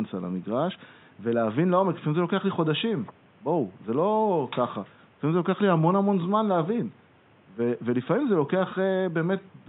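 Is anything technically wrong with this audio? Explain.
No, nothing is technically wrong with this audio; the faint room noise sits about 33 dB below the speech and is part of the recording.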